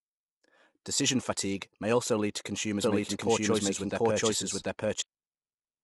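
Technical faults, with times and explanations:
Throughout, low-delay AAC compression: the speech sounds rough and grainy, with noise filling the gaps between harmonics and nothing above 11.6 kHz. This likely comes from short-frame AAC-ELD coding, whose tiny frames resolve pitch poorly, and the damage fits a low bitrate around 32 kbps.
2.82 to 5.02 s, doubled audio track: just after "may also lead to", a second, equally loud, full-band copy of the speech trails the original by roughly 0.7 s, with no decay or room colour, cutting in and out abruptly. A slower second capture path or a misaligned edit is the likely cause.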